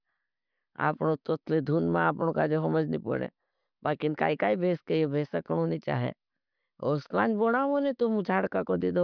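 No technical faults can be heard in the speech, so there are none to describe in time order.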